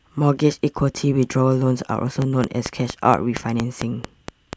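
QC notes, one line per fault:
2.22–4.54 s, train of clicks: a run of about ten near-identical sharp ticks arrives at a steady 4.33 per second, standing roughly 15 dB above the speech and remaining audible in the gaps between phrases. The even spacing and matching shape set it apart from random crackle or isolated dropout clicks; a repeating pulse like this is likely interference from nearby equipment or a faulty connection or power supply injecting the same transient over and over.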